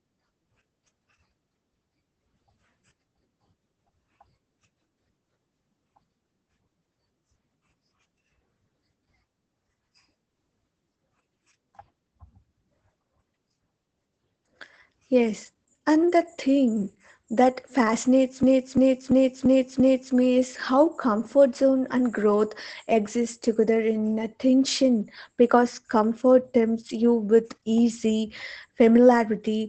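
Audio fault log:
Throughout: Opus voice compression. The speech is muffled and slightly hoarse, with nothing above about 8.8 kHz. This points to the SILK linear-prediction mode at a low bitrate near 12 kb/s. The excitation is coded coarsely in 20 ms frames, which leaves plainly audible roughness.
18.43–20.14 s: system hang loop. Right after "the thing that fascinates", a 341 ms piece of audio repeats exactly five times at 2.93 per second, heard as a machine-gun stutter. The system froze while the hardware kept replaying its ring buffer, which fits a 16384-sample buffer. Playback resumes with "me is how comfort", with essentially no audio skipped.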